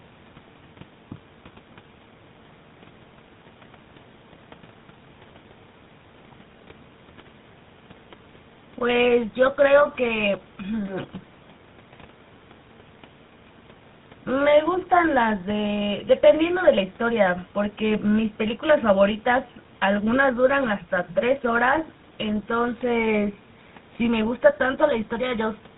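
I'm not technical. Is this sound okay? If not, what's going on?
No. Tandem speech coding affects the whole clip, from start to finish. The speech went through two separate speech coders one after the other, first an older CVSD coder and then the GSM coder used by mobile phones, with an ordinary telephone link between them. Each coder had to work from the already damaged output of the one before, so the voice sounds rougher, more muffled and more warbly, with nothing above 3.8 kHz.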